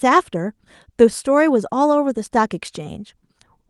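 Speech carried over a WebRTC call path, its top end stopping near 12 kHz as the Opus link band-limits it, with no technical faults to report.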